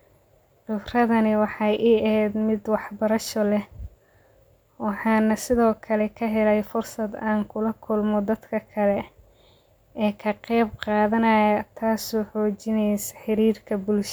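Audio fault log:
The speech signal shows no technical faults at any point in the recording.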